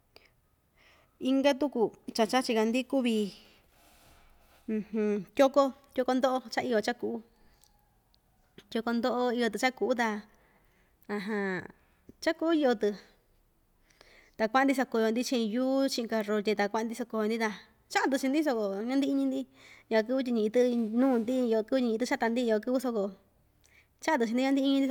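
Nothing stood out on listening to the speech recording.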